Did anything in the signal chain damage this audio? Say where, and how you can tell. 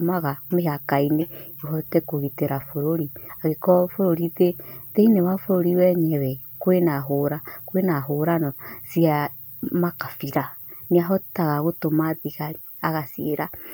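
Yes. Overlapping chunks at the buffer stage: brief clicks at 2.61 s (just after "ũhote kũgitĩra"), 6.63 s and 10.64 s, about 4 s apart. Each block starts about 12 ms early, so that slice replays. The waveform shows a repeated fragment with a step discontinuity. The spectrogram shows a thin broadband vertical line.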